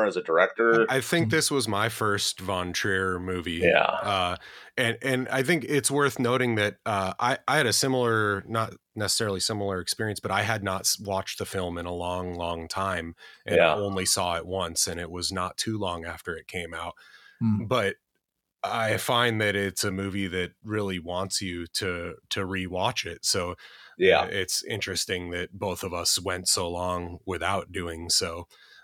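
No technical faults are audible anywhere in the speech recording.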